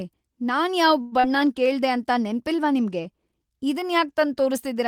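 Speech over a call link, with two faults. After "ನಾನ್ ಯಾವ್", from 1.01 to 1.14 s, the last sound is stretched into a fading buzz or hiss. This is likely a call audio freeze, where delayed packets emptied the jitter buffer and added about 100 ms of gap without losing speech. Then, from 1.20 to 1.26 s, just before "ಕೇಳ್ದೆ ಅಂತ ನೆನ್ಪಿಲ್ವಾ ನಿಮ್ಗೆ", there is a brief smear. It is short concealed packet loss: about 40 ms never arrived, and the receiver filled it from the preceding sound.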